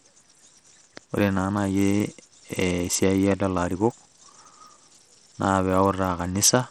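Throughout, the speech sounds dull and gritty with flickering treble, likely Bluetooth SBC compression starved of bits, which fits a bitrate near 80 kbps.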